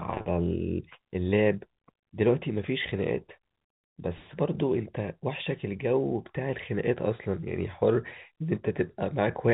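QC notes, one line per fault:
No faults found; the speech carries the 4 kHz ceiling of G.711 mu-law telephone coding, which is working as intended.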